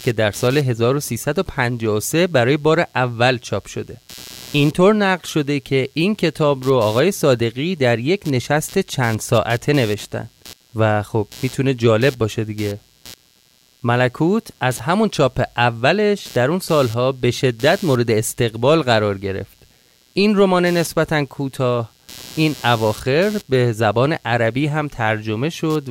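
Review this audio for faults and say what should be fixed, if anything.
Computer activity noise runs throughout this speech clip: a buzz pulsing around 150 times a second, roughly 25 dB below the speech, rising and falling with processor or mouse load through the shared ground. Isolate the audio interface's ground from the computer, for example with a ground-loop isolator or separate power.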